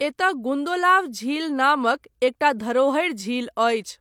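A speech recording, and nothing in it is technically wrong.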